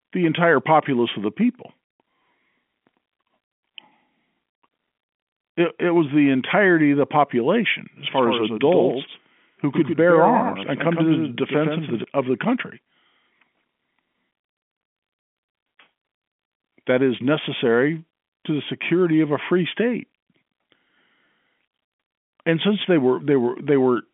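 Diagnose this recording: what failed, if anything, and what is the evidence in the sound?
Between 8.08 and 12.04 s, right after "of the population as" and up to "of the country", there's a doubled audio track: a second copy about 5 dB down, trailing by roughly a tenth of a second, cutting in and out abruptly with no decay. It's likely a second, slower capture path mixed in during call processing.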